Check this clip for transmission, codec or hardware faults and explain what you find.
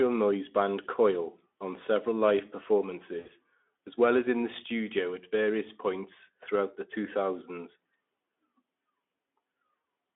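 Two short stretches of VoIP packet loss concealed by the speech codec, both in the Speex-coded narrowband speech.

From 3.19 to 3.30 s, just before "as well as in", and again from 9.81 to 9.83 s, packets went missing. The decoder filled each gap by extending the previous pitch and spectral shape at falling gain, so the sound smears into a brief buzzy tone or coloured noise that fades. The first gap is about 60 ms, which fits three lost 20 ms frames. The second is a single frame. Because the decoder builds each frame on the one before, the speech stays weak or distorted for tens of milliseconds or more after each gap.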